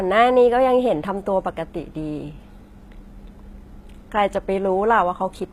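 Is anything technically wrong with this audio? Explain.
Yes. At about 0.92 s the speech drops into an adaptive stream at a lower bitrate and stays there to the end. The player seems to have switched to a cheaper version when the connection slowed, so the change is abrupt but gapless. The top end goes dull with nothing above roughly 14.9 kHz, the highs take on a synthetic, swishy quality, and codec artefacts thicken. That fits a jump from around 96 kbit/s AAC down to a roughly 20 kbit/s HE-AAC stream.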